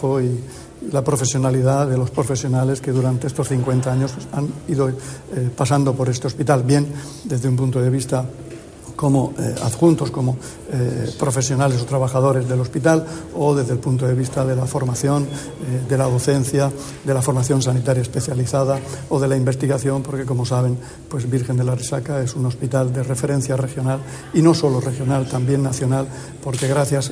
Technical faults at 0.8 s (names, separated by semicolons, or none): none